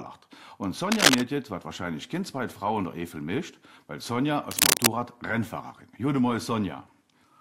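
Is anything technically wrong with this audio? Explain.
Yes. Cable scratch noise appears from 0.92 to 1.21 s and from 4.51 to 4.87 s: dense, uneven bursts of scratchy rustle sitting roughly 5 dB above the sound. The likely cause is a worn cable or connector being moved, its contact resistance fluctuating rapidly.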